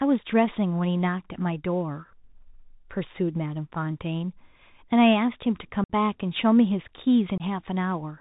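Throughout, the speech sounds narrow and boxy, with a granular hiss underneath, scratchy s sounds and distortion on loud bright moments. This is the Bluetooth CVSD headset codec, which fits a 64 kbps link. It sends one up-or-down bit per sample with an adaptive step, so nothing above 4 kHz survives and sharp rises outrun the step.

At 5.84 s the speech drops into an abrupt hole of about 56 ms, and at 7.38 s a shorter gap of about 22 ms cuts in. Both gaps have abrupt edges, and the audio returns briefly quieter. This is unconcealed Bluetooth headset packet loss. Blocks of a few milliseconds between headset and phone were lost and filled with silence or an idle pattern, roughly fifteen packets in the first gap and about seven in the second.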